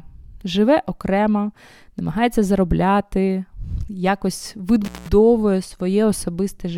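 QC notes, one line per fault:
4.85–5.09 s, intermittent contact: right after "окремо намагається заробляти якось" the speech drops out for about 0.18 s, crackling as it goes and returns, with faint hiss in the gap. A loose plug or cable briefly opened the signal path.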